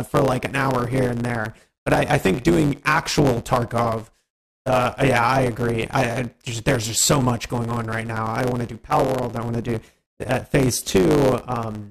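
From the start and for the whole clip, the audio carries a block size mismatch with truncation. One stage produces longer blocks than the next stage consumes, so the tail of every block is discarded. Those cuts repeat 100 times per second, which is heard as a steady 100 Hz buzz under the material. Because part of each block is lost, the audio plays 1.09 times faster than it should, while the timbre stays about the same.

At 1.95 s and again at 3.93 s there is an overlap between stream segments. At each of these boundaries, two segments carry time stamps that overlap, and the player trims the overlap even though the sound there was not actually duplicated. About 6 ms of audio is removed each time, so the waveform jumps and a short click or tiny skip is heard. The two events fall about 2 s apart, matching the 2.0 s segment length.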